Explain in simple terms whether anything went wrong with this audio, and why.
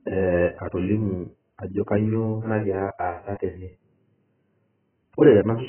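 The speech sounds dull, muffled and smeared from start to finish, with nothing above 3.1 kHz. Heavy AAC compression likely threw away that high detail.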